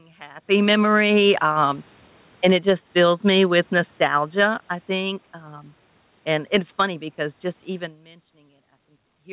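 From about 1.24 s the automatic gain control starts falling. It decided the input was too loud, or its background noise too strong, and eased its gain down by about 8 dB, a gradual slide that carries on until about 7.98 s. You can hear the speech sag slowly, and the room noise sinks right along with it, which is the giveaway that it's gain, not the talker. There's a genuine move toward or away from the mic around half a second in.

Before that slide has even finished, the automatic gain rising kicks in at about 6.73 s and runs to the end. Now the controller thinks things are too quiet and pulls the level back up, so speech and background swell together over a couple of seconds. Another real talker shift around 8 s lands in the middle of it. The overlap makes the level feel like it's hunting rather than settling, all heard through the narrow, sub-4 kHz G.711 call sound.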